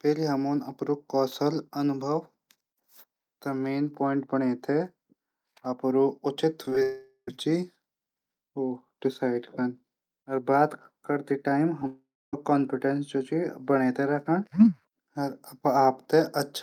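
Right after "अपडू उचित", from 6.65 to 6.82 s, there's a burst of repeated packet loss: five small holes, the longest 15 ms, each patched by stretching the previous sound. About a third of that stretch is filler, so it goes choppy.

It runs straight into what's likely a long network dropout from 6.83 to 7.28 s. Around 440 ms of audio is missing. The fill buzzes on and fades, with roughly 70 ms of near-silence before the sound returns minus the lost piece.

Around 11.80 to 11.82 s, and again at 11.82 s, there are two short concealed packet losses of about 10 ms each. The decoder papers over them by extending the last sound, which comes across as a quick smear or wobble.

Just after, from 11.87 to 12.34 s, there's another likely long network dropout, with about 460 ms missing. This time the concealment tails off sooner, leaving roughly 270 ms of silence before the audio picks back up past the gap.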